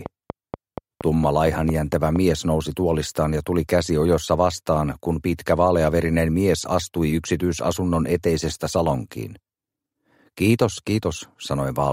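From 0.06 s to 2.17 s a train of clicks sits over the sound. About ten near-identical pulses arrive at a regular 4.3 per second, each standing out roughly 10 dB above the surrounding audio, so they read as a steady ticking laid on top rather than part of the material. The even spacing and repeated shape point to a periodic disturbance, likely interference from nearby equipment or a faulty connection or power supply.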